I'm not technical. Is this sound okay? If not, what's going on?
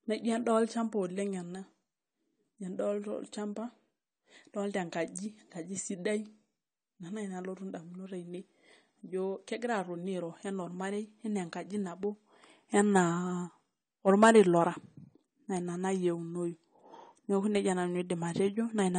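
No. AAC compression runs through the whole recording, from start to finish. The speech sounds dull and smeared, with a warbly, fizzy edge, and nothing above about 9 kHz remains, so the crisp top end is missing. This is likely the result of squeezing the audio hard to make the file small: the encoder throws away detail it judges least noticeable and cuts off the highest frequencies entirely.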